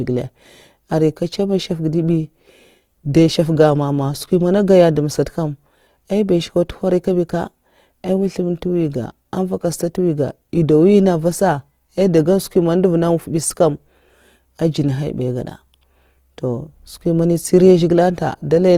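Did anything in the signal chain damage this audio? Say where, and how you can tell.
Yes, the damage is at the codec stage, and it runs the whole length of the speech. The sound is grainy and rough rather than swirly, with bands that feel filled in with noise instead of leaving holes, yet the top end still reaches about 20.2 kHz. That combination points to Opus compression in its music (CELT) mode, likely at a low rate around 24 kbps, where the encoder keeps band energies but runs short on bits for fine detail.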